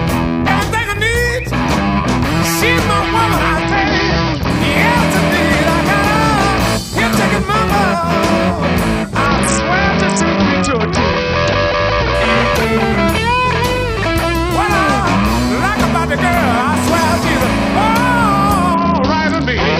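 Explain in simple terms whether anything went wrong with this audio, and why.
Bluetooth SBC bit pool drop at 3.62–4.50 s, 9.26–12.14 s and 18.74 s to the end: the link squeezed the audio, dulling the treble and adding grit, without silencing anything like a dropout would.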